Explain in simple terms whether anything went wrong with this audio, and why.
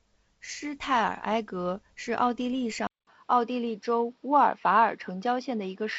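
Around 2.87 seconds, the input was likely switched to a poorer device, such as another microphone or a headset. After a brief silence of about 0.2 seconds, the speech turns duller and boxier until the end, losing its crispest sounds above 5.8 kHz, with a small change in loudness and faint new background noise.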